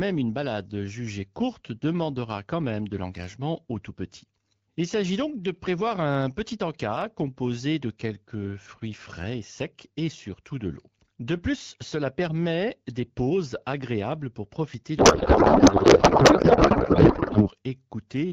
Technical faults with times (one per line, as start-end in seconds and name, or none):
14.98-17.51 codec payload misread